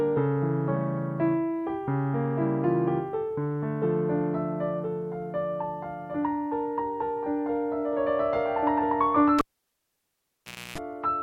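Near the end, at 9.39 s, a cable gets pulled and plugged in while live. There's a pop, about 1.3 s of near silence, then roughly 0.3 s of 60 Hz mains buzz as the plug's tip grounds badly, and a second pop when sound comes back at 10.78 s.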